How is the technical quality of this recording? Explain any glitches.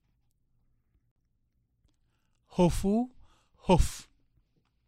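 The recording has one clear glitch. From 1.12 to 1.16 s there is a block of digital silence about 46 ms long. The output buffer likely went unfilled, which fits a 2048-sample block, so the sound cuts out abruptly and returns, leaving a short hole.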